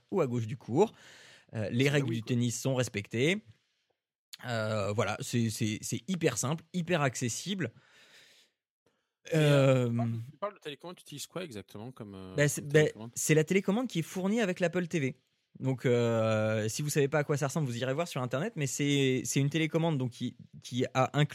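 No technical faults are audible.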